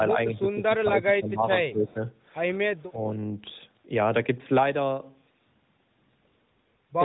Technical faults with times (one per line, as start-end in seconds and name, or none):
0.36-2.00 speech suppressed in double talk
2.77-2.84 echo leak
2.87-2.99 speech suppressed in double talk